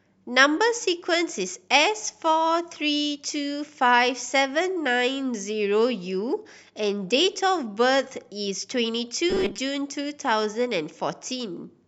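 From 9.30 to 9.60 s, new audio was likely arriving too seldom, so the playback kept filling the gaps by repeating its last short buffer while fresh speech was skipped. The result is robotic sound from repeated short buffers: for about 70% of that stretch the same tiny slice loops, forcing a rigid, metallic buzz at 200 Hz, which fits a 5 ms buffer, with the speech only loosely traceable underneath.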